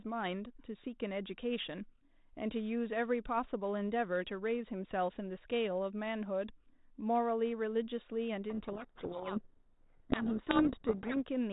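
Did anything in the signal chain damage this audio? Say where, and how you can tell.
Yes, at the codec. From 8.5 to 11.17 s the speech is buried in harsh distortion, a codec payload misread with G.726 code-word bits unpacked in the wrong order.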